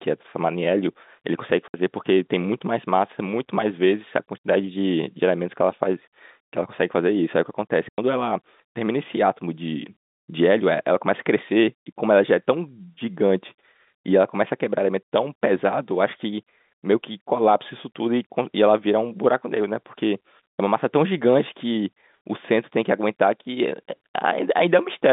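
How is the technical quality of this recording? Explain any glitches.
The recording has two short dropouts from packet loss filled with silence. The speech comes over a G.711 telephone line, so it is band-limited to roughly 150 Hz to 3.7 kHz. The first hole runs from 1.68 to 1.74 s and lasts 60 ms. The second runs from 7.89 to 7.98 s and lasts 90 ms. Both lengths are multiples of 30 ms, which fits 30 ms packets. The receiver got no data for that stretch and played nothing. The speech stops dead, then resumes.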